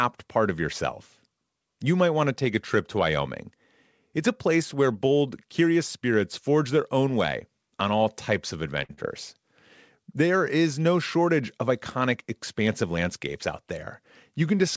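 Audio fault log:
8.84 to 8.91 s, short stall from a late packet. It comes just after "on all types of". A packet arrived late and the jitter buffer ran dry. The receiver held the last sound for about 52 ms until the packet came in. Then playback resumed from the same point. Nothing is lost, but the sound sits too long with a faint buzz. The call's delay grew by those 52 ms.
8.93 to 8.99 s, short concealed packet loss. It follows the stall, still after "on all types of". About 40 ms of audio never reached the decoder in time. The receiver invented roughly 41 ms to cover the gap. It extended the preceding sound, keeping its pitch where voiced and using shaped noise where not. It then faded back into the real signal. The result is a brief smear or wobble.
12.68 to 13.09 s, jitter buffer speed-up. It starts after "no shortage of iconic". Too much audio had built up in the buffer. To shrink the delay, the receiver cut many tiny pitch-period slices in quick succession, about 50 ms in total. 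Playback runs at about 111% speed. Pitch stays unchanged, so the speech just sounds hurried for a moment.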